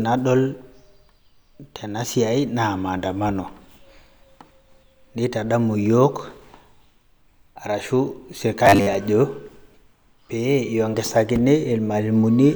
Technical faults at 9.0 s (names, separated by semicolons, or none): robotic sound from repeated short buffers